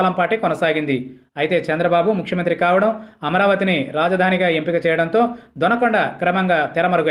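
No technical faults can be heard in this recording.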